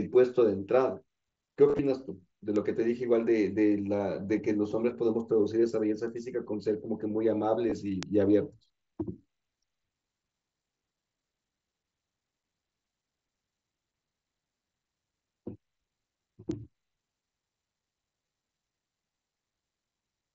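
Around 1.68 to 1.79 s there's concealed Bluetooth headset packet loss: about 60 ms of speech dropped between headset and phone, scattered across roughly 105 ms, with no gap longer than 15 ms. The receiver covers each hole by repeating the best-matching piece of recent waveform, so you get a brief buzzy smear rather than silence. Bit error spikes land at 2.56 and 6.08 s. Each is a sample or a few where one bit flipped, making the value leap by a power of two and snap back, which you hear as a single sharp tick unrelated to the speech. More concealed packet loss comes at 7.70 to 7.72 s (15 ms), heard as a short buzzy patch. Another bit error tick follows at 8.03 s, then a concealed loss of 22.5 ms at 10.79 to 10.81 s with a slight warble as real audio resumes. A last bit error spike at 16.51 s is a single flipped sample, and a final 15 ms concealed loss sits at 18.26 to 18.27 s. All of this rides on mSBC headset audio, which carries the speech up to 8 kHz with light graininess.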